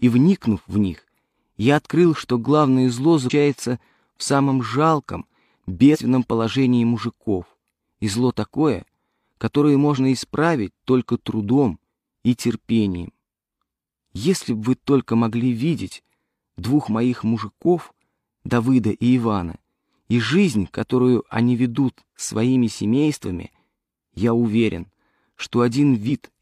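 At 3.25, 5.90, 9.94 and 26.06 s, compressed frames are skipped. Whole frames never play, so the audio jumps ahead. The jumps are roughly 200, 150, 50 and 50 ms, which fits a 46.4 ms frame.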